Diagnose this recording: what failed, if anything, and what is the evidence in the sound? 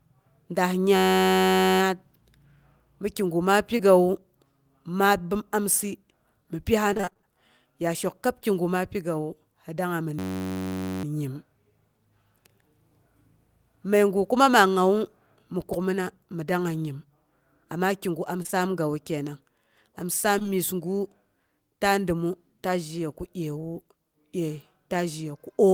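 A system hang loop in the driver or buffer stage appears at 0.96–1.80 s and again at 10.19–11.04 s. Each is a steady buzz near 94 Hz: one 10.67 ms slice repeating about 80 times while the hardware kept cycling its ring buffer, which fits a 512-sample buffer.

Short concealed packet loss on the network path causes brief smears at 3.78 s just after "mi kigu ma", in a run at 18.42–18.54 s after "kigu am", and across 20.38–20.46 s. Roughly 20 ms went missing each time, and the decoder bridged it by extending the preceding sound.

Repeated packet loss (robotic sound) covers 6.93–7.25 s. Eight gaps, the longest 24 ms, leave half of that stretch synthesized by concealment. Each patch continues the last sound before the next hole arrives, giving a choppy texture with fragments missing.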